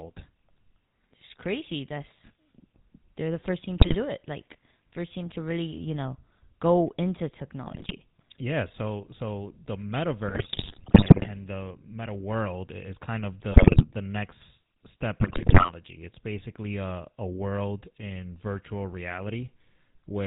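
The whole speech clip carries the GSM full-rate codec sound. Nothing passes above 4 kHz, and coarse pulse excitation makes it buzzy and gravelly. GSM bit errors strike after "first team" at 3.8 to 3.96 s, after "you know go into" at 7.66 to 7.93 s, then at 10.28 to 11.3 s, 13.52 to 13.85 s, and after "the next step" at 15.2 to 15.71 s. Corrupted decoder values bend the spectrum and level into squawks, pops and gargling.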